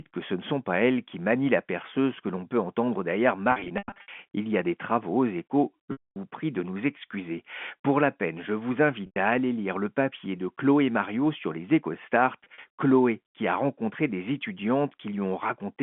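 Packet loss with pitch repetition breaks this telephone-band speech four times. At 3.52 to 4.08 s, after "l'on peut entendre derrière", about 320 ms drops out in runs of up to 100 ms, which fits 20 ms packets. Then 5.92 to 6.16 s before "prie de nous excuser", 9.06 to 9.16 s between "la peine je vous" and "à aller lire le", and 12.44 to 12.64 s. The receiver repeats the last pitch period, so short gaps sound held and buzzy, while longer ones fade to silence.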